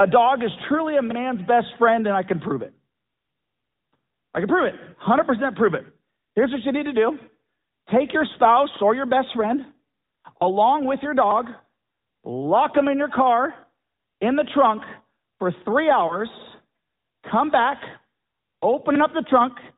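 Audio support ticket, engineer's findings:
Whole clip: band-limited, boxed-in speech with a buzzy, synthetic edge and nothing audible above 4 kHz. Component: AMR narrowband mobile codec on the path. Mechanism: 8 kHz sampling caps the band; the vocal-tract model, driven by sparse pulses per 5 ms subframe, gives the buzz. Damage plainly audible, which fits a mid-range mode around 10.2 kbps. Not compatible with a wideband mobile call.

Three short dips with a smeared, warbly texture. 8.34–8.40 s, after "take your", before "or your best friend". 10.38–10.43 s, before "with your". 16.08–16.16 s, after "the trunk for three". Cause: lost AMR speech frames. The decoder repeated the last good pitch and vocal-tract settings at falling gain. Each dip fits a single lost 20 ms frame. Likely a radio-link fault causing checksum failures.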